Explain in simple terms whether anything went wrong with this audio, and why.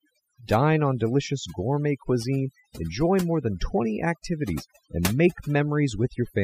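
Overdone noise removal runs through the whole clip: the cleanup was set so strong that the pauses fall to near silence with twinkling specks, and the quietest parts of the speech get stripped away with the noise. A simple noise gate would cut the pauses cleanly, without that sparkle.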